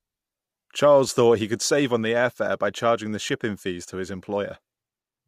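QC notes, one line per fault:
1.08 s and 3.28 s, lost LE Audio frames: each is a very brief roughened, hissy blip in the speech, with the sound carrying through instead of cutting to silence. The gap at each point fits a single missing 10 ms frame, which the LC3 decoder concealed by replaying the previous frame's spectrum with randomised signs. Because each loss is so short, the concealment never fades toward silence, leaving only a momentary grainy smear.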